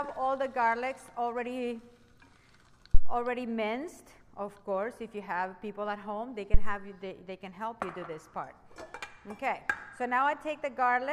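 A supply switched on or off on a live input sends a voltage step through the coupling capacitors, producing a phantom power thump at 2.95–3.20 s and again at 6.54–6.80 s: a deep low thud peaking at about −6 dBFS, dying away within roughly 60 ms each time.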